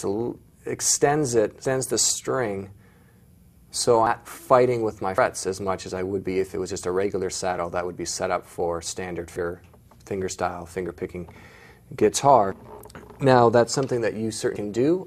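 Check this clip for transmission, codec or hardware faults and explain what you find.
Yes, there are codec faults: compressed frames skipped at four points. At 4.07 s, 5.18 s, 9.36 s and 14.56 s the sound abruptly jumps forward, losing about 0.3 s at the first point and about 0.2 s at each later one. Whole frames never reached playback, missing from the file or rejected by the decoder as damaged. The gaps fit roughly two to three frames of about 92.9 ms each.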